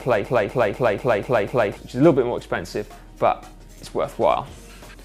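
The player, encoder or stream likely stalled and kept resending the last fragment it held, producing a broken-record loop that is already under way when the audio begins and runs until 1.77 s. A piece about 0.25 s long repeats exactly, back to back, six times, giving a rapid stuttering pulse with no variation between repeats. Whatever should have played during those first 1.77 s is lost, replaced entirely by the looped fragment.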